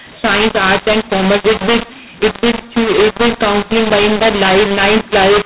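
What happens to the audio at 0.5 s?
At 0.5 s the speech is caught in a mu-law and A-law mix-up running through the whole clip: A-law samples decoded as mu-law scramble the levels, giving harsh distortion and hiss filling pauses, unlike clipping's level-bound crunch.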